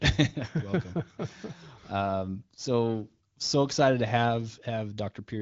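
No technical faults heard.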